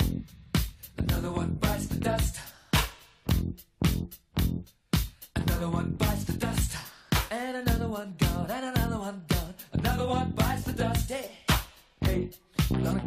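Nothing stood out as a technical problem on listening.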